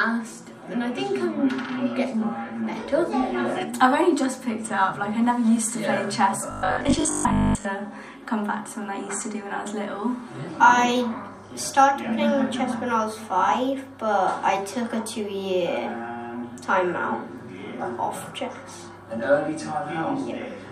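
From 6.51 to 7.65 s, robotic sound from repeated short buffers: a rigid 50 Hz metallic buzz, likely from most of the audio being replaced by repeated 20 ms fragments.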